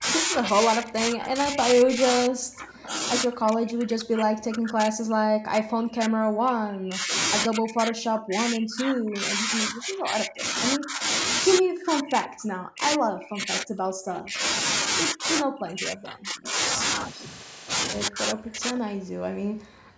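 Speech suppressed in double talk runs from 0.0 to 7.15 s, 7.46 to 11.04 s, 11.59 to 14.44 s, 15.13 to 16.58 s, and 18.08 s to the end. The speech dips by up to around 40 dB or drops out in pieces. The likely cause is an echo canceller mistaking overlapping talk for echo.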